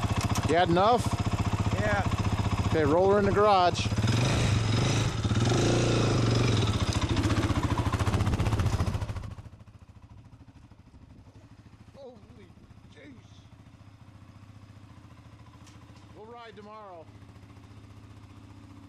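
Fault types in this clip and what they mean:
No fault types show up in this clip.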